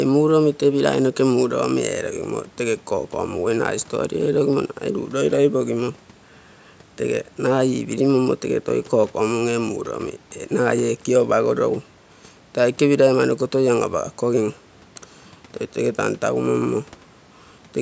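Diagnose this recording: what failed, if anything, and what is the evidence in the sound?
Nothing failed: the speech has only gone through a call's microphone processing, which trims the deepest bass and leaves nothing above 8 kHz, and nothing in the sound is evidence of a fault.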